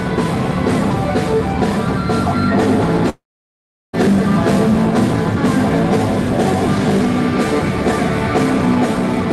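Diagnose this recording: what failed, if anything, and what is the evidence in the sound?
The failure is at the network stage: a long network dropout, likely from lost packets, between 3.09 and 3.95 s. The last sound fades out as a buzz or hiss, then falls to about 0.74 s of silence. A spectrogram shows smeared bands fading into a blank gap, and the audio resumes with 0.84 s missing.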